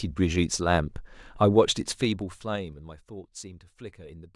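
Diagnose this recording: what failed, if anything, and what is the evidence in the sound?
The level drop between 1.88 and 2.90 s is where it goes wrong: zipper noise. Instead of gliding, the gain falls in hard 3 dB jumps, about five a second, for a total of roughly 20 dB. Each jump lands as a small click, so you hear a ticking ride along the speech while it fades. That points to gain being updated per buffer with no smoothing or ramping, so the stage is the driver or buffer level.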